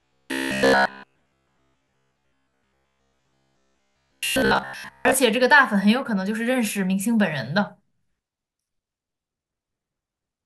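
From 0.02 s to 5.14 s, the speech has robotic sound from repeated short buffers. The voice becomes a rigid, metallic buzz pitched at 66.7 Hz. It still tracks the rough shape of the speech. The likely cause is audio arriving too slowly, so the player loops a short fragment, about 15 ms long, to fill the gaps. That fits the buzz frequency. Roughly seven tenths of this stretch is repeated rather than real audio.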